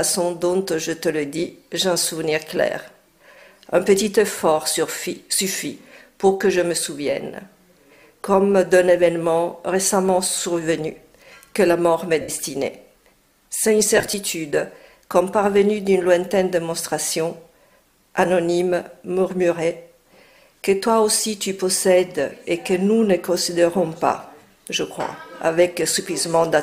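At 12.21 s, lost LE Audio frames leave a gap of about 67 ms (to 12.29 s), fitting a run of 7.5 ms frames. The LC3 decoder fills it by reusing the last spectrum with scrambled signs, so tones smear into noisy hiss rather than dropping to silence or stuttering. From 13.97 to 14.14 s the losses scatter over 165 ms, none longer than about 20 ms, giving brief grainy flickers.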